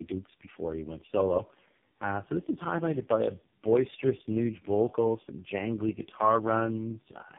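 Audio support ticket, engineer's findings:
Tandem speech coding, throughout: call likely crossed several speech-codec borders, re-encoded at each, so every coder works on prior damage. Result: rough, muffled, warbly speech, nothing above 3.7 kHz; low-rate warble points to a final AMR-NB stage.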